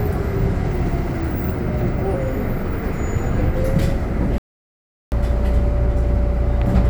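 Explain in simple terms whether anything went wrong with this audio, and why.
From 4.38 to 5.12 s, an audio dropout to silence cuts out about 0.74 s completely, with no background hiss, unlike a quiet moment, most likely from a lost input connection.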